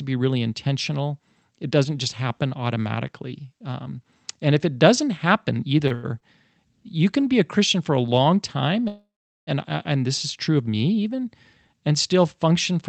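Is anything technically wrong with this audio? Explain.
Yes. The speech has four brief hitches and one longer freeze.

Short stalls from late packets occur at 5.87, 5.94, 6.20 and 7.21 s. At each, a sound is held too long, with a faint buzz or dip, by about 30, 92, 17 and 22 ms. A packet arrived after it was due, the jitter buffer ran dry, and the receiver stretched the last sound until the packet turned up. Playback then continued from the same point, so nothing is lost but the timing is pushed back.

A call audio freeze runs from 8.88 to 9.50 s. The last sound is drawn out into a fading buzz or hiss, then goes silent for roughly 410 ms before the speech resumes where it stopped, about 592 ms later than it should. This is likely caused by packets being held up in transit long enough to empty the jitter buffer. The receiver had to fill the wait, which inserts a gap without removing anything.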